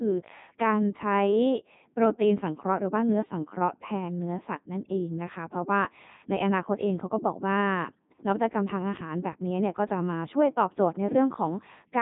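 The whole clip has passed through a Codec 2 vocoder, likely at its 3.2 kbit/s mode, rebuilding the speech from sine waves. The result is robotic and buzzy, with nothing above 3.8 kHz.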